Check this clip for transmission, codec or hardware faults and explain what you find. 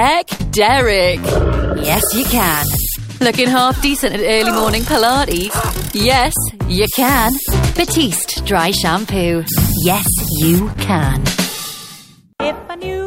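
Three faults are audible: one burst of packet loss near the start and two short concealed packet losses later on.

From 0.33 to 0.41 s there is a burst of packet loss. About 60 ms of audio never arrived in time, so the receiver extended the last sound for roughly 58 ms, fading it out before playback jumped ahead. The result is a brief held, dying smear, with that stretch of sound missing.

At 5.47–5.51 s and 10.73–10.77 s there is short concealed packet loss. Each time about 20 ms failed to reach the decoder, and the receiver patched the gap by continuing the preceding sound before blending back. Each patch is heard as a momentary smear or wobble.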